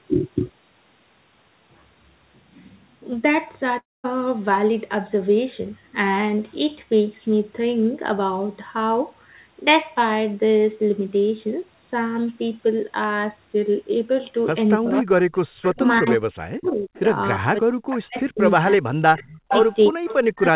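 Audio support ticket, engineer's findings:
Long network dropout, 3.78 to 4.06 s: about a quarter-second of audio gone. The tail smears into a fading buzz, then roughly 0.2 s of silence before speech resumes past the hole. Likely packet loss with jitter-buffer concealment giving up.

Speech suppressed in double talk, 14.76 s through the end of the clip: the voice dips hard, down by about 40 dB at worst. Likely the echo canceller can't separate near talk from loudspeaker echo and ducks both.

Echo leak in the same stretch, 352 ms behind the talker: 14.92–15.01, 15.62–15.69, 16.64–17.00, 17.91–18.52, 19.17–20.15 s. Copies sit about 10 to 25 dB under the speech. Likely a speakerphone whose canceller isn't fully removing the echo. Band-limited to 4 kHz, consistent with G.711.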